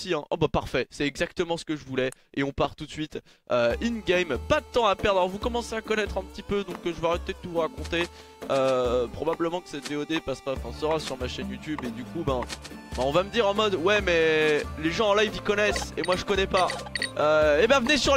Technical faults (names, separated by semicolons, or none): loud pop